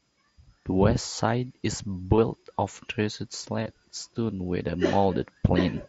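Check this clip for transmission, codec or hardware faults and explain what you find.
Two short dropouts in the Bluetooth headset link, both patched over by concealed Bluetooth headset packet loss, between 2.16 and 2.18 s and between 3.63 and 3.66 s. Each gap lasts about 22.5 ms, which fits a run of three lost frames. The phone had no audio for those moments, so it filled them by repeating the closest-matching recent stretch of speech. This produces a brief buzzy, held tone at full level and a slight warble as the real signal resumes, heard against the mSBC wideband headset sound.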